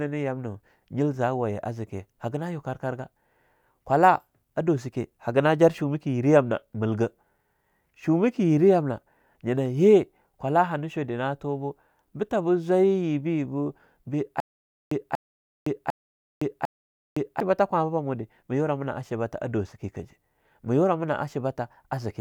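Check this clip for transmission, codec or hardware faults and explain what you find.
There's one clear fault here: a stutter with silent gaps from 14.4 to 17.4 s. A short burst of speech, about 238 ms long, repeats four times, each followed by roughly 513 ms of dead digital silence, so it cycles every 750 ms or so. It's likely a stalled player or stream replaying its last fragment on each retry and then running dry. Whatever speech belonged in that stretch is simply gone.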